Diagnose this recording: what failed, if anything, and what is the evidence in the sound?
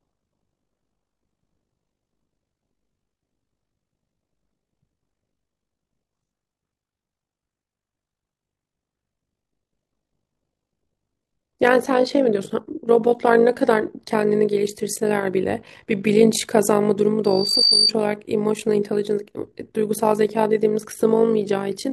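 The whole clip has overlap-add ripple: a rough, robotic flutter on the speech at around 50 Hz, with the level dipping about 11 dB each cycle. That points at call processing, where frame-based analysis and resynthesis use overlapping windows that don't add back up to a flat gain.

There's a loudspeaker feedback squeal from 17.24 to 17.92 s: a 4.6 kHz tone that swells over roughly 0.4 s to sit a few dB above the speech. It's on the analogue side, with the mic hearing its own loudspeaker and loop gain passing unity at that frequency.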